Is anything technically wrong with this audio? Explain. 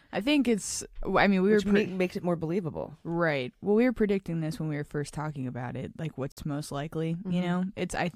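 Yes. At 6.32 to 6.37 s, between "talking about it like" and "most likely", the speech drops to dead silence for about 51 ms and then carries on. This is likely a Bluetooth stall: radio interference delayed packets, the headphones' buffer emptied, and playback paused until retransmissions arrived. On a waveform it shows as a flat gap cut abruptly into the signal; a spectrogram shows a clean vertical blank band across all frequencies, with hard edges on both sides.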